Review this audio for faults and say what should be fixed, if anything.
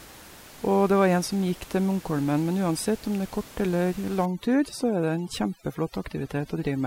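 From 4.25 s to the end at 6.86 s, overdone noise removal sets in. The suppressor pushes every frequency band near its noise estimate far down or off, taking the quietest parts of the speech with it. The background drops and breaks up into twinkling specks. The room noise it is reacting to sits about 21 dB below the speech, so it needs only gentle treatment. To prevent this, reduce the suppression depth and keep a low residual noise floor instead of removing bands entirely.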